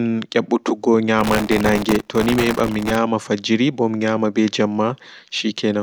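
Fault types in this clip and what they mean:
Processor overload crackle: from 1.19 to 2.96 s, hundreds of missed sub-millisecond buffers replay stale audio as sustained gritty tearing, not one isolated dropout.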